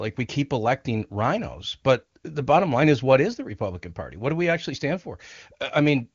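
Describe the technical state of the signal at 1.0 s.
At 1.0 s the speech is intact, carried through the AMR wideband (HD Voice) codec at 23.85 kbit/s, with the band ending at about 7.3 kHz.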